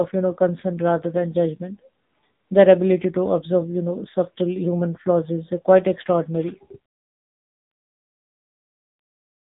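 Throughout, the speech carries heavy AMR narrowband mobile codec damage: nothing above 3.8 kHz survives, and the low bitrate, around 6.7 kbps, leaves the voice buzzy and synthetic.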